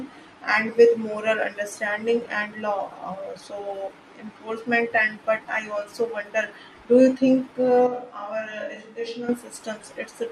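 At 7.87 s the speech turns abruptly roomy and hollow, losing bass and dropping to around 10 dB quieter, with faint background room noise roughly 35 dB below the speech. It snaps back to its earlier close, full sound at 9.29 s. This is a switch to a distant microphone: the close microphone's signal likely dropped out, leaving a mic farther away to pick up more of the room along with the talker.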